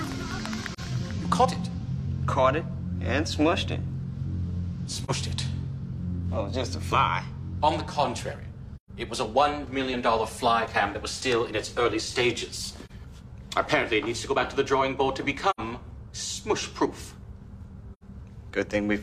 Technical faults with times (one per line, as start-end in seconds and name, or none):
0.73-0.80 AAC frame loss with muting
5.04-5.11 AAC frame loss with muting
8.76-8.90 AAC frame loss with muting
12.85-12.91 AAC frame loss with muting
15.50-15.60 AAC frame loss with muting
17.93-18.03 AAC frame loss with muting